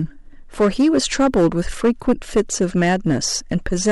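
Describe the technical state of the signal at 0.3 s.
Harsh crackle and fuzz sit on the louder parts of the speech at 0.3 s, as they do across the whole clip. This is hard clipping. The signal is driven about 8 dB past what a stage in the chain can pass, so its peaks are sliced flat at the ceiling, roughly one sample in twenty. Those squared-off tops add a spray of high harmonics that the ear hears as gritty distortion on every loud moment.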